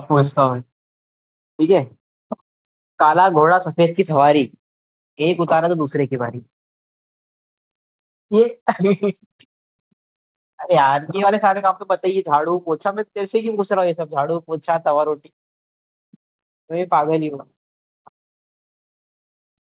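Nothing here counts as a fault; the speech just carries the narrow, phone-like band of a call link with nothing above 4 kHz, which fits a G.711 mu-law path at 64 kbps doing exactly what it's built to do.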